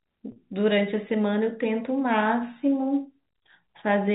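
At 0.32 s the speech breaks up for 40 ms, until 0.36 s. This is packet loss with pitch repetition, which fits two 20 ms packets going missing. The receiver fills the gap by repeating the last pitch period, so the sound briefly holds as a slightly buzzy tone within the G.711 telephone band.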